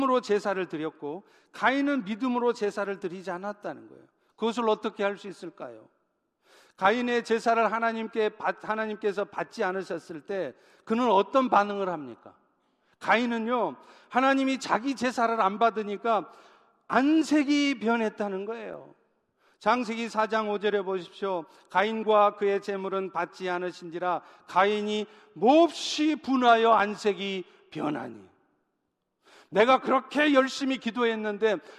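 Recorded speech, with no technical fault to be heard anywhere in it. There is nothing to place at a time or trace to a cause.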